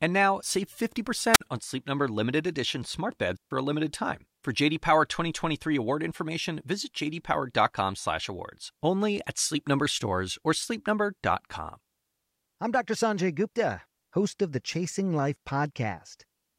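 At 1.33 to 1.41 s, a wireless microphone squelch dropout: the radio signal fades, hiss rises briefly, then the receiver mutes the speech for about 48 ms.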